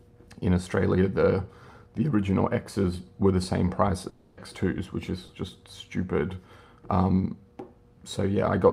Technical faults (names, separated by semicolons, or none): long network dropout; short concealed packet loss